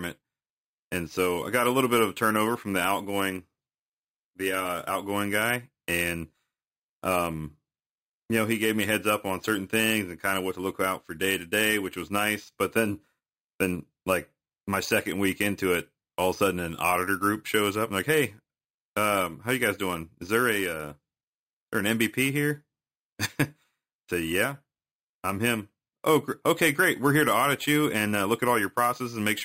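From start to finish the speech carries imaging from sample-and-hold upsampling: samples were repeated without a smoothing filter, leaving mirrored spectra between 5.5 kHz and 11 kHz, which fits an original rate near 11 kHz. The result is a metallic fizz about 14 dB below the signal that tracks its level.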